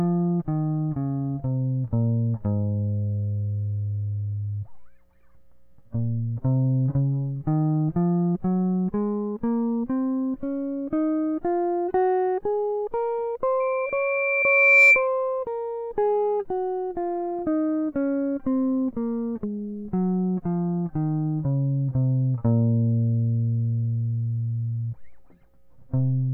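A microphone in this music clip is picking up the loudspeaker it feeds, so at 2.4 kHz the loop gain tips past one. This causes loudspeaker feedback squeal from 13.60 to 15.08 s: a single tone swells over roughly a second and a half to around 10 dB above the music.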